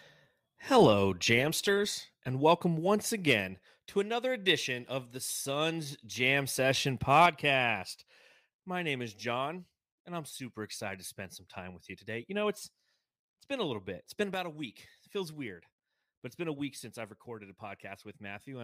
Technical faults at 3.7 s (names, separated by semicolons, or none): none